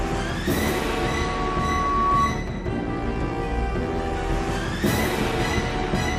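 From 0.50 to 2.39 s there's a loudspeaker feedback squeal: the mic hears its own speaker, and a 1.1 kHz tone swells over a second and a half to about 5 dB above the sound.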